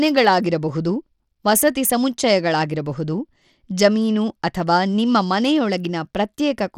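From start to finish the speech carries plainly audible damage that points to Bluetooth SBC compression as the likely cause, at a data rate that fits roughly 96 kbps. With so few bits to share, the coarse quantisation leaves a gritty, grainy edge on the sound. A spectrogram shows a hard ceiling with nothing above 17.5 kHz, and the top bands look patchy and speckled. The waveform itself looks ordinary.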